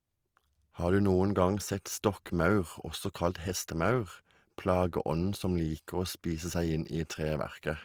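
From start to finish the speech carries Opus compression, likely from its CELT music mode at a rate that fits about 24 kbps. Sparse bands are filled with folded or noisy energy, so the speech turns grainy and rough. Unlike MP3 there is little swirling and few hollow gaps, and the top stays open to about 20.4 kHz.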